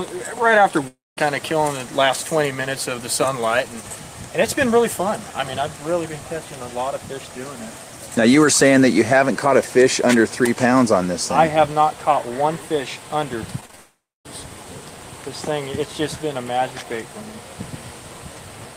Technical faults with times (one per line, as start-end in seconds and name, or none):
0.87-1.19 long network dropout
13.61-13.75 short concealed packet loss
13.75-14.27 long network dropout